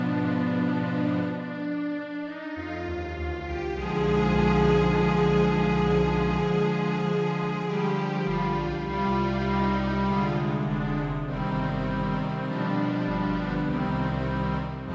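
No technical faults can be heard anywhere in this audio.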